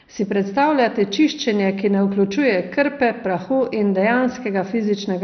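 Throughout the speech, the sound is dull and gurgling, with a granular roughness and nothing at all above about 6.2 kHz. This is likely MP2 compression at a very low rate, something near 48 kbps. Short of bits, the coder shuts off whole upper sub-bands and quantises the rest coarsely. On a spectrogram the energy stops at a hard ceiling near 6.2 kHz, with blocky patches flickering on and off just below it.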